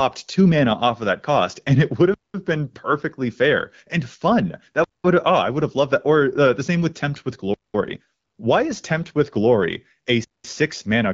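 Speech with a gap between chunks: four hard-edged silences of 200 ms each, at 2.14 to 2.34 s (between "cost and it would" and "been perfectly fair and"), 4.84 to 5.04 s, 7.54 to 7.74 s and 10.24 to 10.44 s. They recur every 2.7 s, which fits 2.5 s chunks played back with a pause inserted at each join. Nothing is lost, but the flow stops abruptly. On a waveform each gap is a flat line with square edges. On a spectrogram it is a clean vertical blank band across every frequency.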